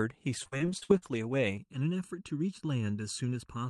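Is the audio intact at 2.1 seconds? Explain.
No. From 1.57 s to the end of the clip, one channel runs late by about 0.7 ms, and the two channels are summed to mono. This channel delay causes comb filtering: parts of the speech common to both channels cancel at evenly spaced frequencies, starting around 700 Hz and repeating above it. At 2.1 s the voice therefore sounds hollow and phasey, with fixed notches carved through its spectrum.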